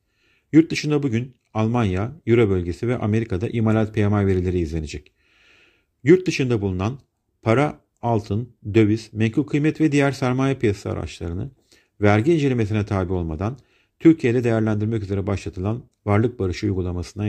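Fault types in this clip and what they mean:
No technical faults can be heard in this speech recording. There is nothing to list under any fault type.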